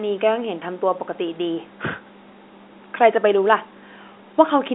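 Telephone-line speech with no audible technical faults.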